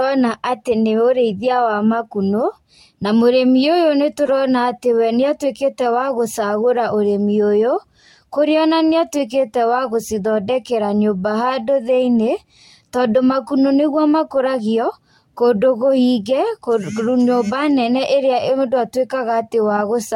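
A speech clip with one corrupt frame decoded, from 4.26 to 4.29 s, just before "atĩ we nĩatuĩkĩte". Flipped bits in about one compressed frame were decoded anyway, so wrong gains or misread codes put energy at the wrong frequencies for those 30 ms. It is heard as a short chirp or blip peaking around -15 dBFS. On a spectrogram it shows as a brief block of misplaced energy unrelated to the surrounding speech harmonics, and on the waveform as a frame-length disturbance.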